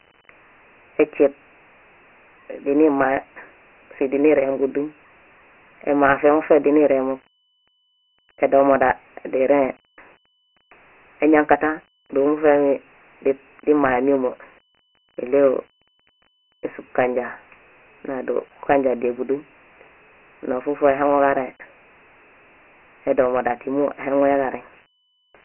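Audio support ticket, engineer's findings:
Dialogic VOX ADPCM, whole clip, 0 to 25 s. Speech stored as 4-bit adaptive PCM at a low sample rate; the 3 kHz ceiling fits 6,000 samples a second, about 24 kbps. Nothing above 3 kHz, thin low end from the phone-line band near 300 Hz. Heavy coarse quantisation: gritty hiss riding every syllable.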